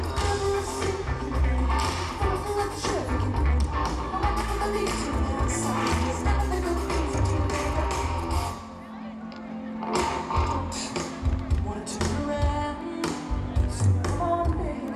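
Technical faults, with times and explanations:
No technical faults can be heard in this audio. There is nothing to list at any point in it.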